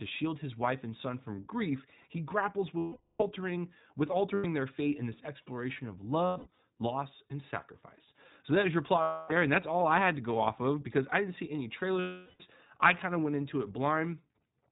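Throughout, the iLBC codec cuts the band off at 4 kHz, so a spectrogram stays empty above that line. Its roughness and synthetic edge are plainly audible, as each 20 ms frame's excitation is coded on its own, which fits a rate near 15.2 kbps.

Lost iLBC frames occur at 2.78–3.23, 4.34–4.46, 6.26–6.58 (scattered, longest run around 100 ms), 9.02–9.33 and 12.00–12.43 s. The decoder repeats the last pitch cycle mixed with noise, heard as a held buzzy or breathy vowel. On a spectrogram this appears as frozen, smeared harmonic bands, and the speech recovers almost immediately afterwards.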